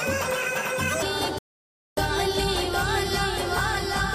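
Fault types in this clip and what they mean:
Doubled audio track: Under everything there's a second full-band copy of the same sound, about as loud as the original and trailing it by roughly 0.7 s the whole way through. It's dry, with no decay or room tone to suggest an echo, so it reads as a flat, out-of-step double. The likely cause is the signal being captured twice, once through a slower path, or an edit that left two copies misaligned.
Section at the wrong speed: The opening stretch, from 0 to about 1.02 s, plays 1.71 times too fast, so everything there comes out hurried and shifted up by around ten semitones, since speed and pitch move together. Right after that it drops back to normal rate and pitch. That points to the section likely being played or fitted against the wrong clock rather than any deliberate pitch effect.
Rebuffering stall: At 1.39 s the sound cuts to silence and sits there until 1.97 s, then carries on exactly from where it stopped. 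Nothing gets skipped. The gap just inserts 587 ms of dead air into the timeline. That's the classic signature of a player running dry on downloaded audio and waiting for more data to arrive before resuming playback.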